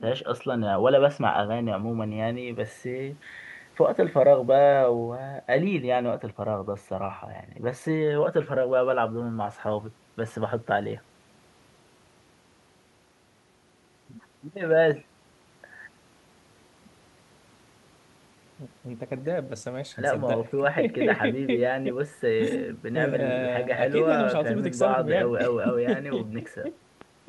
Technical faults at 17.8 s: none

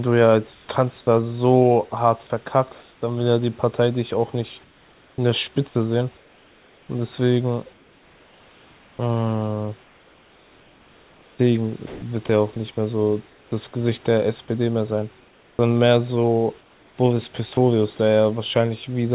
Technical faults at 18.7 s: none

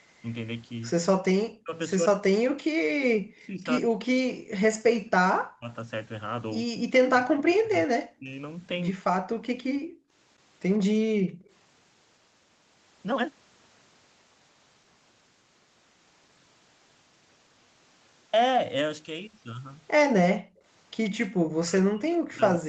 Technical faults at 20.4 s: background gated by the echo canceller

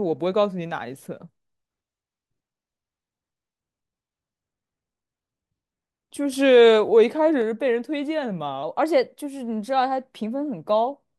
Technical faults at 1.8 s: none

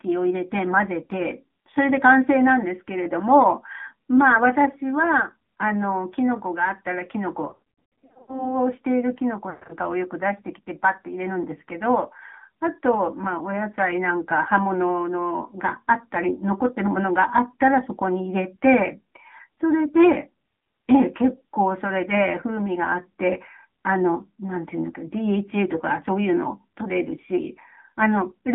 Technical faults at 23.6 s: AMR narrowband mobile codec

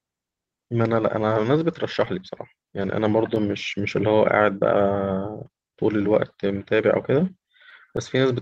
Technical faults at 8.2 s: clock drift between sender and receiver; repeated timing corrections; scattered short gaps

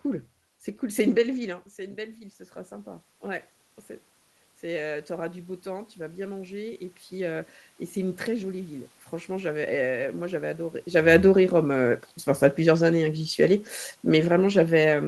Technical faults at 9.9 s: automatic gain rising

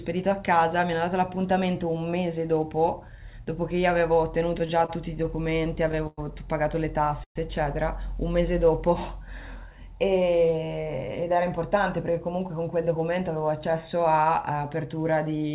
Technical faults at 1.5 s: none

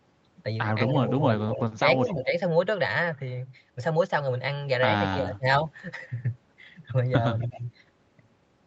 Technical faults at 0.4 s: none

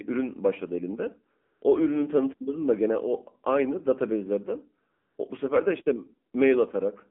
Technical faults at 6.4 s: AMR narrowband mobile codec

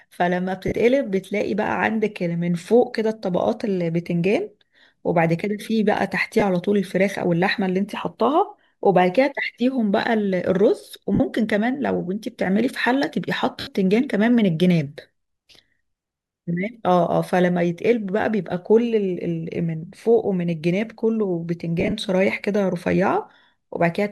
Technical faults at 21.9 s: lost LE Audio frames

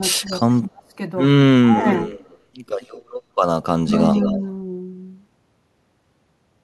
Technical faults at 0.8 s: speech suppressed in double talk

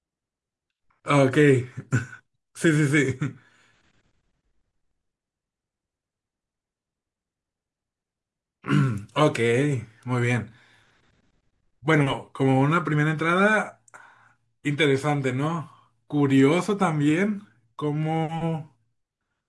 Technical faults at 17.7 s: none

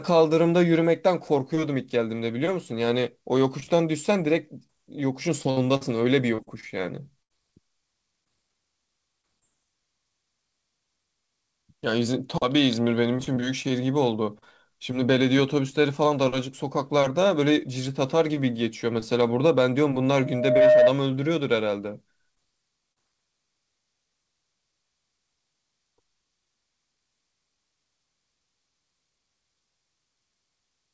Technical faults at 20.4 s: loudspeaker feedback squeal

